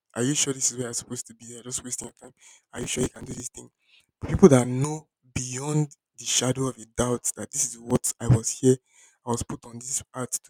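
From 1.95 to 3.4 s, and again from 7.90 to 8.21 s, the processor falls behind and misses its deadlines for filling very short audio buffers, each only a few milliseconds long, many times in a row. Each missed buffer is simply skipped, leaving a hard-edged hole in the speech. The result is processor overload crackle: a gritty, tearing burst that clears just before "thing people that know" and, in the shorter second episode, just before "I was here".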